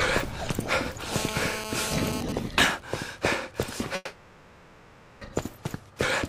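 The audio carries three faults in sequence. From 1.13 to 2.21 s there is GSM phone buzz. A hard, raspy tone at 217 Hz sits about 5 dB below the signal, rich in harmonics. It is steady, which fits a nearby 2G phone in a call whose radio bursts are rectified by the audio circuit. From 2.22 to 3.79 s it turns into GSM signalling bursts. The buzz breaks into even ticks with a longer 217 Hz buzz twice a second, well below the signal. That is the same phone sending only sparse burst groups while its user is silent. From 3.95 to 5.23 s comes a long network dropout of about 1.3 s. The last sound is stretched into a fading buzz or hiss and ends in a brief silence. The audio then resumes further on, with that stretch missing. The likely cause is packets that never arrived.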